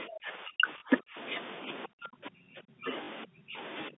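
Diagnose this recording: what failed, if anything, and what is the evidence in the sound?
The speech dips by up to about 35 dB from 0.06 to 1.17 s, 1.87 to 2.92 s, 3.25 to 3.58 s and 3.9 s onward, likely speech suppressed in double talk by the call's echo canceller.

Short robotic stutters occur at 0.78 to 0.82 s and 3.04 to 3.08 s. This is network packet loss with the last packet repeated, filling 40 ms each time, consistent with two 20 ms packets.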